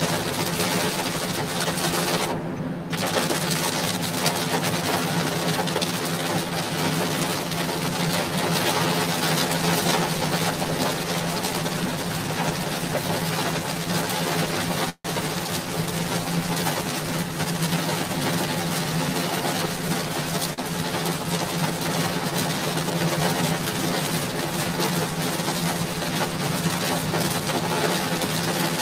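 The audio has a hollow, phasey colour from start to finish. This is channel delay (comb filtering). One channel runs roughly 10 ms behind the other, and the two are summed to mono. Content shared by both cancels at regularly spaced frequencies. The first notch sits at around 40 Hz, with further notches repeating evenly up the spectrum. The notches stay fixed, so the colour never changes.

From 14.89 to 15.07 s the sound stops moving forward. The last sound is carried on for about 151 ms, and roughly 70 ms of that is near silence. The audio then resumes exactly where it left off, with nothing lost. The whole stream is now about 151 ms later than before. This is a call audio freeze, likely from packets held up in transit until the jitter buffer ran dry.

Between 17.01 and 18.05 s the audio runs at about 107% speed, with pitch unchanged. It sounds hurried. This is a jitter buffer speed-up. 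The buffer had built up more audio than it wanted. The receiver trimmed small pitch-period slices again and again, removing roughly 70 ms in total. A second speed-up runs from 26.69 to 27.41 s, at about 105%, cutting around 50 ms.

At 20.54 to 20.60 s one sound is held slightly too long, with a slight buzz or dip. This is a short stall from a late packet. The packet missed its playout time. The receiver stretched the previous sound for about 41 ms until the packet arrived, then continued from the same point. Nothing is missing, but the timing slips by that amount.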